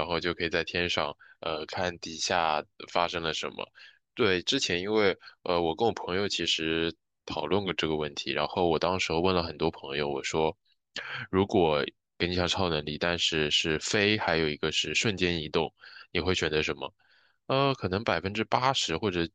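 Listening to the whole recording, nothing in the speech stood out as a technical fault.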